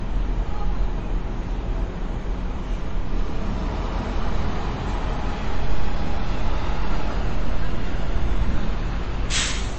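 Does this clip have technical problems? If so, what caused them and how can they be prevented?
Yes. Throughout, the sound is watery and swirly, with metallic chirps on sharp, hissy detail, smeared attacks, and nothing above 8.3 kHz. The likely cause is heavy MP3 compression at a bitrate near 31 kbps: the encoder cuts the treble and drops weak frequency lines that flicker between frames. To prevent this, encode at 128 kbps or higher, or keep a lossless copy.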